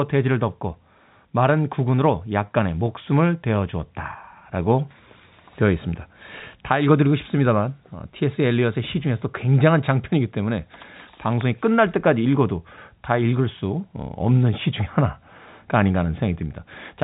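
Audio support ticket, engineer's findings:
No audible faults in this recording.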